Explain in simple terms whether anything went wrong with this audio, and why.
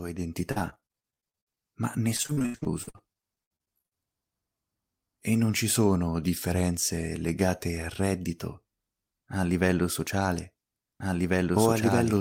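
Yes. Between 0.51 and 1.59 s, and again from 2.17 to 3.96 s, chunks of the audio stream kept getting lost in transit. The system hid each hole by stretching the last bit of sound, so this speech turns choppy and robotic, with roughly a third of each stretch patched over and dropouts lasting up to about 80 ms.

From 11.0 s to the end there is a doubled audio track. A second copy of the same speech is mixed in, roughly a second and a half late and about as loud as the original, likely from the signal being captured twice or from a misaligned edit. It starts abruptly and sounds like an overlapping repeat rather than an echo.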